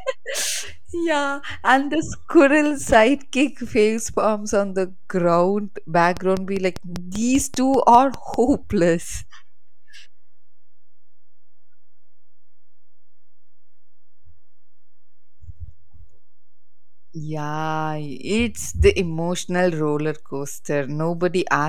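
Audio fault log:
throughout  DC offset: the whole speech waveform sits displaced from zero by a constant of about -31 dBFS. It isn't audible as a sound in itself, but it eats into headroom on one side and appears as steady energy at the very bottom of the spectrum.
6.17–8.35 s  train of clicks: a regular ticking of about 5 clicks per second, around ten in all, each peaking roughly 10 dB above the speech and heard through gaps as well. The similar, evenly spaced pulses point to likely interference or a faulty connection.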